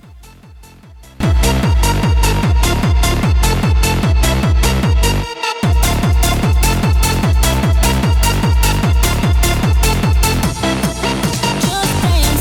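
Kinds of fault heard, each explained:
One channel inverted: for the first 1.2 s the sound falls by about 26 dB and turns faint, likely because one channel's polarity is reversed so the shared centre cancels in mono; unlike a dropout, a faint difference residue remains rather than silence.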